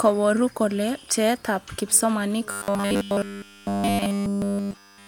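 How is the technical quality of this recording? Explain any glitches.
The recording breaks down in its second half. From 2.51 s to the end at 5.08 s, the speech turns into a rigid, metallic buzz pitched at 100 Hz, still loosely tracing the words but losing its natural inflection. This is robotic sound from repeated short buffers. The likely cause is audio arriving too slowly, with playback filling the gaps by looping the most recent chunk. A 100 Hz buzz fits a repeated segment about 10 ms long, and all of that stretch is made of these repeats rather than fresh audio.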